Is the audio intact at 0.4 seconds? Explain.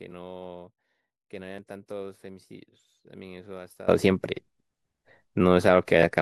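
No, at 0.4 s the speech has nearly vanished, about 21 dB down from 0 to 3.88 s, likely one channel inverted, cancelling the shared centre when summed to mono.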